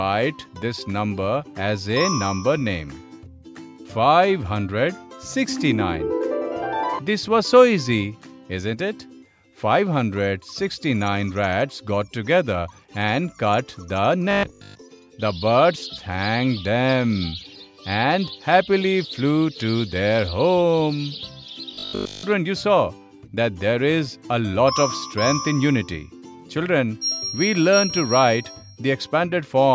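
From 14.31 to 14.83 s, and again from 21.71 to 22.23 s, the sound turns into a rigid, metallic buzz at 50 Hz. This is robotic sound from repeated short buffers, likely caused by audio arriving too late, so the same 20 ms slice is replayed to fill the gap and most of the real audio in each half-second is skipped. A waveform shows identical 20 ms cycles; a spectrogram shows evenly spaced 50 Hz harmonic lines.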